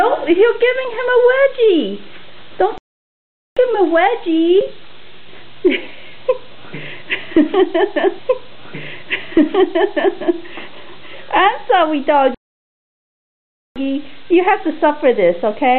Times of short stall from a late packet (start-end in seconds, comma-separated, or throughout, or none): none